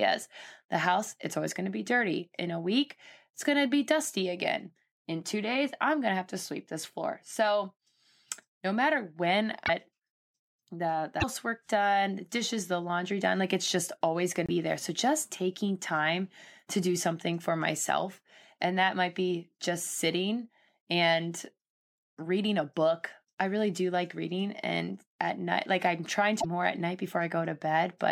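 At 9.65 to 9.70 s, 11.20 to 11.24 s, 14.46 to 14.50 s and 26.40 to 26.45 s, the speech skips forward and a brief chirp, burst of noise or short gap of roughly 45 to 55 ms replaces the missing sound. That is about two MP3 frames of 26.1 ms each. The likely cause is a broken MP3 bit reservoir: frames were lost, and the frames that followed decoded against borrowed bytes that now belonged to other frames.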